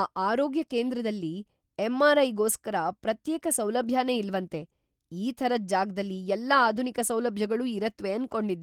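No technical faults can be heard in this speech.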